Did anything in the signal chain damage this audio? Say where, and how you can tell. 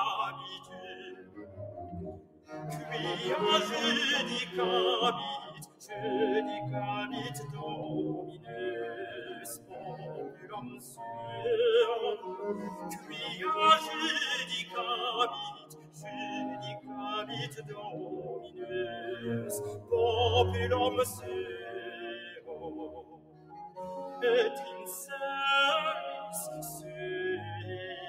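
Yes. In the call-processing stage, a speech-tuned noise suppressor was applied to music or sounds, treating steady content as noise. Gain swings about 15 dB, so the sound pumps and thins.

The clearest cases are sound cut by the noise suppressor: sustained passages sink by about 13 dB at 0.57–2.52 s, 5.49–5.87 s, 8.29–11.0 s, 14.65–18.66 s and 21.18–23.78 s, and by about 9 dB at 12.17–13.13 s. Decays shorten while attacks pass through.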